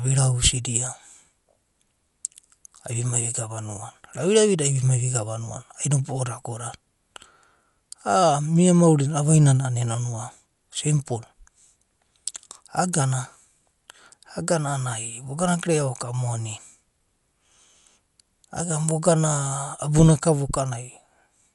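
The speech is dull from start to finish, with nothing above about 11.4 kHz. A rough, fluttering noise sits around tones. The likely cause is Dolby Digital compression at a low bitrate, which fits 64 kbps. Starved frequency lines were filled with noise.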